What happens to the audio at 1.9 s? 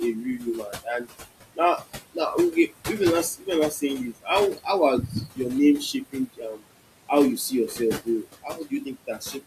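At 1.9 s the speech is being cut by the noise suppressor. The fault spans 1.55 to 2.18 s. The suppressor mistakes part of the speech for background noise and turns it down along with the noise. The deepest drop is about 21 dB. Only short stretches are hit, adding up to roughly 150 ms. Those parts sound swallowed and faint, as if the sound briefly falls away.

Noise suppressor artifacts are also present at this moment, as they are across the whole clip. The suppressor lowers the bands it judges to be steady noise, frame by frame, by about 20 dB. The room noise, which sits about 11 dB below the speech, drops in the gaps and comes back under the speech.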